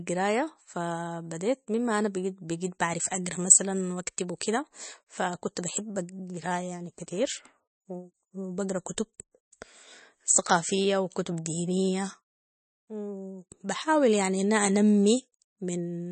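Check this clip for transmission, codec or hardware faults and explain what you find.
One codec fault runs through the whole clip. The speech sounds watery and swirly, with metallic chirping on s sounds, smeared consonant attacks, and nothing above 8.3 kHz. This is likely MP3 compression at a bitrate around 33 kbps. Starved of bits, the encoder cuts the treble and lets weak frequency lines drop in and out between frames.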